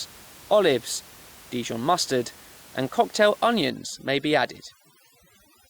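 Overdone noise removal from 3.7 s, after "mustard and cocktail", to the end: bands near the noise estimate are gated away, leaving twinkling near-silence and taking quiet parts of the voice with them.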